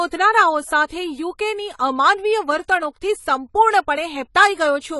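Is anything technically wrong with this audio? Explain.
Yes. Throughout the speech, nothing sounds above 11.5 kHz, and the top is dull and smeared with a plainly audible fizzy warble on sibilants. This is likely AAC compression at a low bitrate, around 32 kbps. Its swirling texture, not just missing highs, separates it from a simple low-pass filter.

From 0.86 to 0.90 s comes pre-echo: the codec spread quantisation noise across its whole block, so about 42 ms of hiss precedes a sharp attack. Because the hiss sits before the onset rather than after, it is distinct from reverb or ringing.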